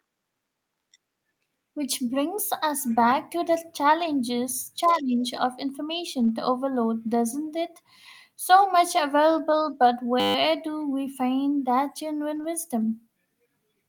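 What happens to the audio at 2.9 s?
Right around there, from about 2.87 to 2.97 s, you get a lost packet rebuilt from error correction. Some packets went missing, but the following ones carried low-bitrate backup copies, and the decoder played those instead, so there's no dropout, just a brief patch that sounds rougher and noisier than the speech around it. The damage adds up to roughly 60 ms of rebuilt audio, which fits about three lost packets.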